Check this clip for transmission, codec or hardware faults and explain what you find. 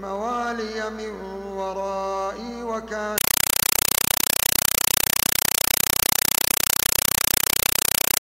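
One fault is present. From 3.18 s to the end of the clip, the audio gives way to a compressed stream played as audio: an AC-3 (Dolby Digital) bitstream reaching the output as if it were ordinary PCM samples, with no decoder in the path. Each coded frame arrives as a 5.33 ms burst of dense data followed by zero padding, repeating at 31.25 Hz, which fits a 256 kbps stream. The result is very loud, harsh static with a rapid chattering pulse where the sound should be.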